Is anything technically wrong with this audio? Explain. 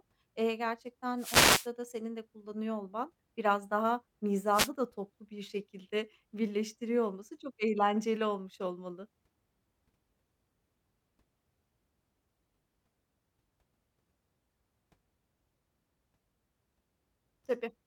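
Yes. Wireless microphone noise hits occur from 1.17 to 1.69 s and again from 4.51 to 4.70 s. An analogue FM radio link fades when reflected copies of the signal arrive out of phase and cancel at the receiver. The receiver's own noise then rises above the weakened carrier and can break into clicks. The speech is briefly masked by a swish of static, about half a second long the first time and roughly a fifth of a second the second time.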